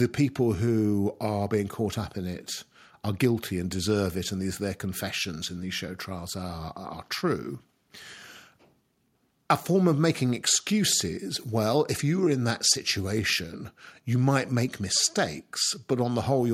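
Speech recording, with nothing technically wrong to report.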